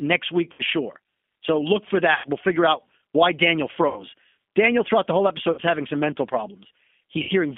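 Speech carried over the G.729 codec throughout sounds rough and slightly synthetic, and a spectrogram shows energy confined to a band of about 200 Hz to 3.4 kHz. VoIP packet loss concealed by the speech codec occurs at 0.53, 2.14, 3.88, 5.52 and 7.23 s, each gap 60 to 100 ms long. At each one the decoder stretches the last sound into a fading buzzy tone or coloured noise. The waveform shows repeating, decaying cycles there, and the spectrogram shows smeared, frozen harmonics.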